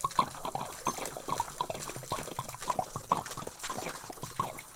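A call bitrate drop hits this recording of sounds at 2.67 s and lasts to the end. The connection's bandwidth estimate collapsed and the encoder was throttled, with the audio pointing to a fall from around 64 kbps to roughly 12 kbps, held at its lowest for about 1.23 s. Starved of bits, the codec quantises coarsely and trims the high frequencies, so the sound turns rough, watery or muffled.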